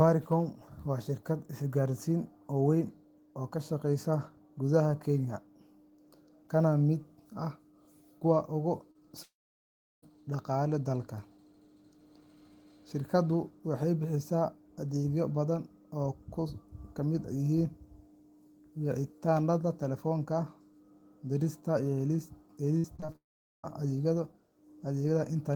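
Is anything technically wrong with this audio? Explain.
Yes, the speech has three kinds of packet-loss damage.

From 8.91 to 8.97 s, just after "kuwa ugu", there is a short concealed packet loss. About 40 ms of audio arrived too late to play, and the decoder bridged the hole by extending the preceding sound before blending back into the real signal. It is heard as a brief smear or wobble. It is distinct from a long dropout because the sound never stops: the patch is too short to fade into silence.

From 9.23 to 10.04 s, between "kuwa ugu" and "dhaqaalaha dalka", a long network dropout is the likely cause. Around 0.8 s of audio is missing. The last sound carries on briefly as a fading buzz and then gives way to roughly 0.72 s of silence. Speech returns further on, with the lost portion simply gone. That stretch of dead air separates it from a short concealed loss.

From 22.78 to 23.16 s there is repeated packet loss with a robotic sound. 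Five separate gaps, the longest 55 ms, were each patched by continuing the last sound. Concealment fills about a third of the span, which gives choppy speech with fragments missing. Unlike a single short loss, the holes follow one another closely. Unlike a dropout, audio keeps returning between them.

Straight after, from 23.16 to 23.65 s, another likely long network dropout follows. It again shows a brief fading continuation and then about 0.44 s of silence before speech resumes.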